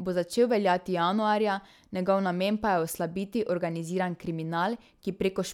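No technical fault can be heard anywhere in this short speech recording, and the signal holds steady with no audible disturbance.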